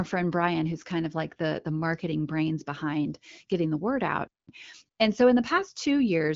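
After "word out", AMR comfort noise fills 4.43 to 4.47 s and 4.89 to 4.97 s. Speech frames stopped. Smooth synthetic noise briefly replaces the real background, over light wideband coding.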